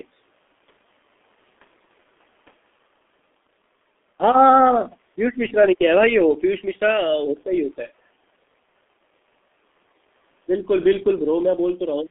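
Throughout, the speech shows heavy G.723.1 codec damage. The band stops near 3.5 kHz. Coarse, slow frames leave it muffled and hoarse, consonants blurred.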